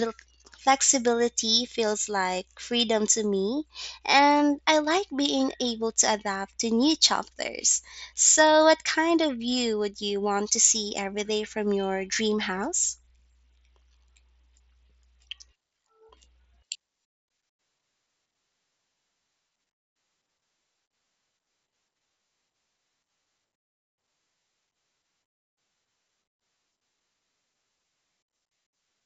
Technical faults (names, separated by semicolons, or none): none